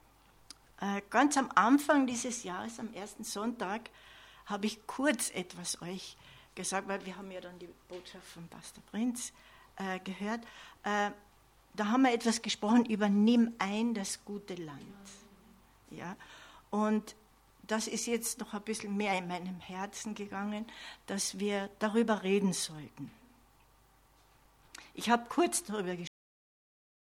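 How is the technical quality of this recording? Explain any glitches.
The recording has one clear fault, at the very end. At 26.07 s the audio is abruptly truncated, a cut-off end: the final buffers were never written out, so the sound stops mid-event and drops straight to digital silence with no natural decay, staying silent for the last 1.1 s.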